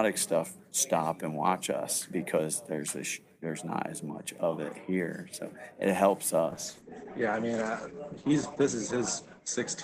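At 6.51 s there's a call bitrate drop: the encoder got squeezed, the sound going coarse, rough or watery, with the top end cut from about 20 kHz to 8 kHz, which fits roughly 64 falling to 11 kbps. It doesn't recover before the clip ends.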